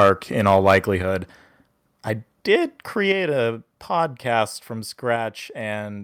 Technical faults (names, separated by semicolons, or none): microphone overload; microphone volume stepped down